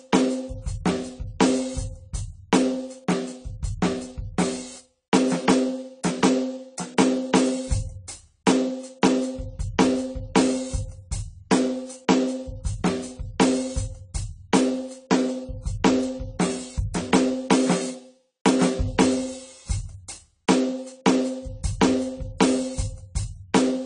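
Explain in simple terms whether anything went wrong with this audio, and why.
Something did go wrong, and it runs through the whole piece of music: it sounds like heavy AAC compression. Nothing comes through above about 10 kHz, so the top end feels dull and closed in. Sustained notes and any hissy, bright sounds pick up a watery, fizzy warble. That's what you get when the encoder is squeezed hard, throwing away detail it guesses you won't miss, and likely why it sounds this way.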